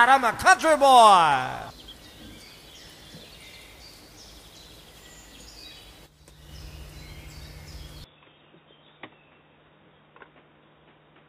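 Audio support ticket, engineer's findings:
Input switched to a poorer device, 8.04 s to end of clip. Abrupt dull, boxy tone, nothing above 3.8 kHz, level down about 5 dB, new noise floor about 40 dB under signal, no gap at the switch. Likely cause is a change of input device, not a bandwidth cut, because tone, level and noise all change together.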